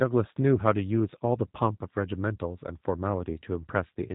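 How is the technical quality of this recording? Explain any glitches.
The recording has been squeezed through a narrowband speech codec for its whole length. The G.729 codec damage is plainly audible from start to finish. The encoder discards everything above 4 kHz and rebuilds the speech from a vocal tract filter, a pitch predictor and a few sparse pulses per frame. This leaves the voice muffled, slightly rough and synthetic, with the buzzy character that fits an 8 kbit/s G.729A stream.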